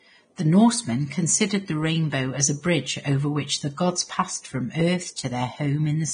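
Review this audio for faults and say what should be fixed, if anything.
Vorbis compression, throughout the speech: the treble is gone above about 9.7 kHz, and what remains up top has turned hissy and grainy, with roughened tones and smeared consonant attacks. This is likely heavy low-quality Vorbis encoding, consistent with a bitrate near 23 kbps, where the encoder spends too few bits on the residue above its spectral floor, so fine high-frequency detail is replaced by noise of similar energy. Prevent it by encoding from the original source at a substantially higher Vorbis quality setting or bitrate.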